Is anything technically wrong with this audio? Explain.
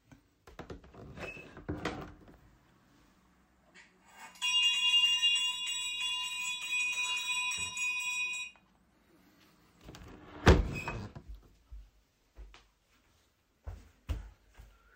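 No, nothing is technically wrong with this audio.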